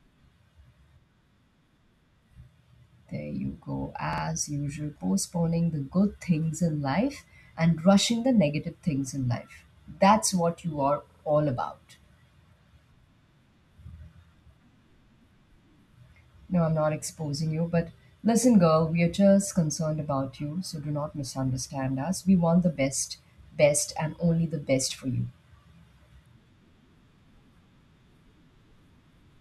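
Three repeated-buffer stutters occur in this speech: at 1.02 to 1.07 s, at 4.13 to 4.23 s just before "usual postponing", and at 11.10 to 11.24 s between "what you are" and "all about". Each time fresh audio arrived late, so the same 46 ms slice, which fits a 2048-sample buffer, replayed once, twice, then three times, with nothing skipped. A spectrogram shows identical side-by-side blocks split by thin vertical lines at the hard joins, and the waveform shows a copied segment with steps at the seams.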